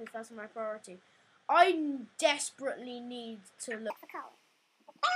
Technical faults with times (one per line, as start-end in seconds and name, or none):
3.90-5.16 section at the wrong speed